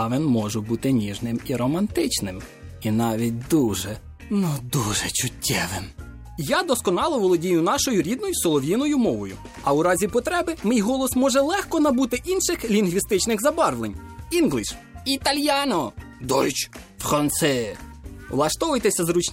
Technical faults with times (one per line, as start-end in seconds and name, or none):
none